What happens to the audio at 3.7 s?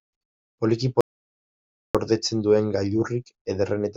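Nothing goes wrong at 3.7 s; the speech carries on intact through that moment with no audible fault.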